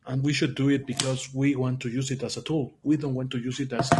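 From start to finish the speech sounds rough and grainy, with a hiss filling the gaps between the pitch harmonics and a top band that sounds thin and synthetic. This is likely low-delay AAC compression (AAC-ELD) at a low bitrate, near 32 kbps. At such a bitrate the coarse quantization leaves noise between the harmonics. A plain low-pass cut removes the highs cleanly without adding noise, whereas here the roughness sits inside the harmonic structure itself.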